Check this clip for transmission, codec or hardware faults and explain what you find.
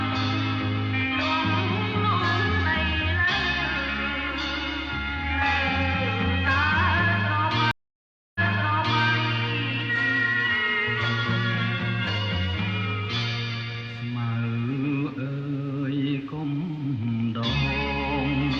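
One transmission fault is audible. From 7.71 to 9.05 s there is a stream reconnect. The connection dropped, the sound cut to 637 ms of silence, and a restarted decoder picked up 697 ms earlier in the stream, so the preceding stretch plays twice. On a waveform or spectrogram it shows as a flat empty gap followed by a repeat of the pattern just before it.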